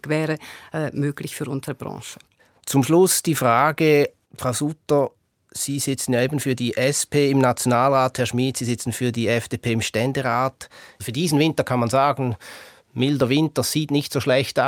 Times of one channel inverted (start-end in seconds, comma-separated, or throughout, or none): none